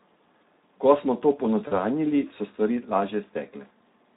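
Throughout the clip, the speech carries the Speex codec's damage: a plainly hoarse, noisy texture, as the CELP coder has too few bits to rebuild the excitation faithfully, which fits a setting of about 11 kbps. On a spectrogram, harmonics look smeared and grainy rather than cleanly striped.

From 1.67 to 1.74 s, just after "smo to", there is VoIP packet loss concealed by the speech codec. About 40 ms of audio went missing, consistent with two lost frames. The decoder stretched the last pitch and filter into a sound that fades. The waveform shows the level shrinking frame by frame.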